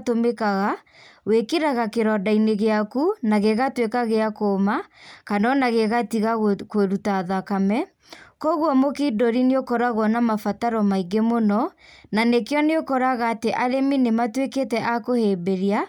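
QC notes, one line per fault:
14.19 s, bit error spike: a single sharp tick that sits apart from the speech around it. A flipped bit knocked a few consecutive samples off by a power of two before they snapped back, so you get a broadband click peaking at about -37 dBFS.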